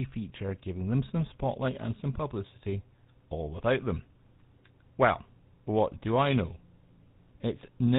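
A buzzy, gravelly roughness runs through the whole speech clip, with nothing audible above 4 kHz. This is GSM full-rate codec damage, consistent with 13 kbps: a modelled vocal tract excited by sparse regular pulses, which discards fine excitation detail and coarsens the voice.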